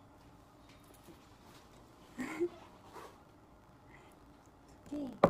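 Throughout, a block size mismatch (truncated) drops the tail of each block, which fits 1024-sample blocks, leaving a 54.4 Hz buzz and audio running 1.16 times fast at near-normal pitch.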